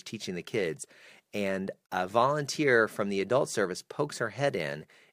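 At 1.86 s the speech stops abruptly for 44 ms. This is a gap at a join of encoded pieces, left by untrimmed encoder padding between 4-second segments.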